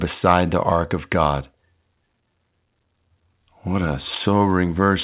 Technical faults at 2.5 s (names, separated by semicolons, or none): none